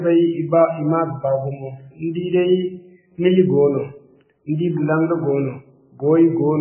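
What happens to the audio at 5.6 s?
At 5.6 s the speech is still under the same damage it carries from start to finish: heavy MP3 compression, most likely at a very low bitrate around 9 kbps. Starved of bits, the encoder cuts everything above 3 kHz and zeroes the weaker frequency lines, which then blink on and off from frame to frame. The speech sounds dull and muffled, with a watery, swirling texture, metallic chirps on s sounds, and smeared consonant onsets.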